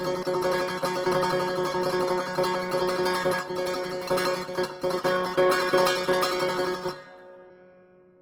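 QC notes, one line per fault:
Throughout, Opus compression: the music keeps its full bandwidth, reaching up to about 20.4 kHz, yet tones come across noisy, rough and grainy, and the damage is plainly audible. The likely cause is an Opus encoder in its music mode at a low rate, fitting something near 16 kbps. It holds each band's energy but, lacking bits for detail, fills bands with folded or noise-like content, so pitched sound turns coarse while opening few holes.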